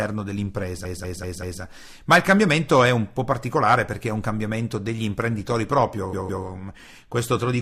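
Repeated frames at 0.85 to 1.62 s: a 192 ms block of the speech plays four extra times, a stutter that adds 768 ms, which fits a run of about six compressed frames being written or sent more than once. Repeated frames again at 6.13 to 6.45 s: a 160 ms block plays twice more, adding 320 ms, consistent with around five duplicated frames that the decoder plays over again.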